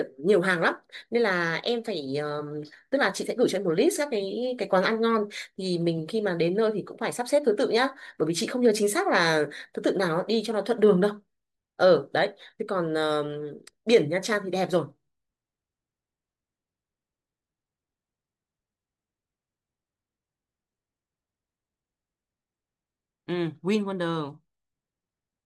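No faults are audible anywhere in this speech recording.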